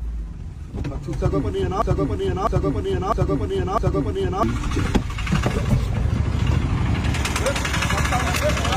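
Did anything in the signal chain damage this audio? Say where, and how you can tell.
Yes. From 1.82 s to 4.43 s a stretch of about 0.65 s plays four times in a row, a broken-record loop that likely comes from the playback or streaming buffer stalling and resending the last fragment it held. It is not echo or reverb: each pass is an exact copy, with no decay and no new sound underneath. The audio that belonged to those 2.6 seconds is simply missing.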